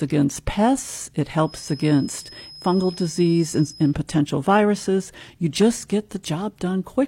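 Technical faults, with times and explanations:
1.42 to 3.98 s, feedback whistle: right after "against pests it", a thin, steady tone at 5.1 kHz sits behind the speech, swelling and fading slowly in level and staying well under it, around 20 dB down, until it drops away before "potential viruses". The likely cause is a loudspeaker-to-microphone loop hovering just at the edge of feedback, so that one frequency keeps ringing without building up into a full howl.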